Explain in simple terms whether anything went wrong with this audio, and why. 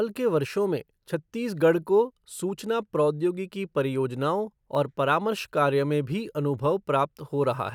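The playback or recording chain most likely let a tiny piece of the digital audio slip through the cracks at 4.75 s. This is called dropped samples: a few of the thousands of snapshots that make up each second of sound went missing, a tiny fraction of a millisecond in all. Nothing you would notice as missing from the speech, but the sound suddenly jumps to a later point, producing one short, sharp click.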